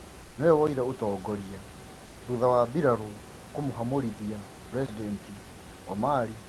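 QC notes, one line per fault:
0.23–0.35 s and 2.07–2.15 s, before "thutha wa mbiraru kumuhamurithia": comfort noise in place of the background. The room background gives way to steady, featureless noise about 2 dB quieter, likely synthetic fill from Opus discontinuous transmission.
4.86–4.89 s, after "thutha wa mbiraru kumuhamurithia": block of digital silence. About 21 ms drops abruptly to silence, leaving a short hole, which fits one unfilled 1024-sample output buffer.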